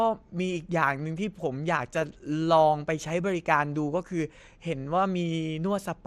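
Speech sounds dull and gurgling throughout, with granular distortion; a spectrogram shows upper bands flickering on and off, likely from MP2 compression, consistent with about 80 kbps.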